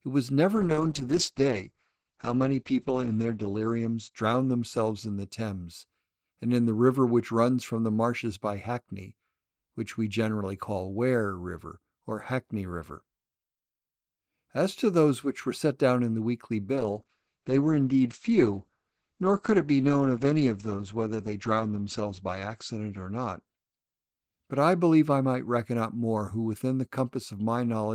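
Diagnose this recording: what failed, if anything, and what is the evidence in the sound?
A call bitrate drop at the codec stage, driven by the network's bandwidth estimate, occurs twice: 0.57 to 5.71 s and 16.76 to 25.27 s. Each time the speech loses its top end, falling from about 20 kHz to 8 kHz, and turns coarse and watery, bottoming out for roughly 3 s and 5 s, which fits a fall from around 32 to 9 kbps. Unlike packet loss, nothing drops out or glitches; unlike a fixed filter, the muffling lifts again.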